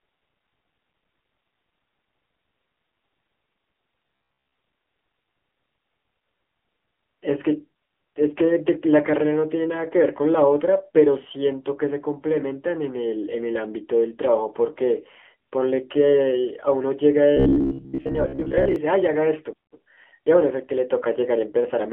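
Throughout, the speech carries the AMR narrowband mobile codec sound. Nothing above 3.4 kHz survives and the lows thin out below about 300 Hz. Unlike a simple telephone filter, the voice itself turns buzzy and synthetic, a plainly audible roughness that fits a low rate near 7.4 kbps.

From 4.07 to 4.59 s and again from 17.37 to 18.76 s, the voice becomes a rigid metallic drone pitched at 66.7 Hz. This is robotic sound from repeated short buffers, likely caused by one 15 ms chunk being replayed for roughly half the audio. It differs from dropouts because no silence appears, only a fixed buzz that still loosely tracks the speech.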